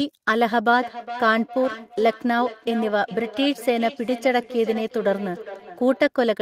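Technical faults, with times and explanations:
0.8–6.1 s, feedback echo between two devices: the speech keeps coming back roughly every 0.4 s, at most about 14 dB down, because a second device's speaker leaks into the mic uncancelled.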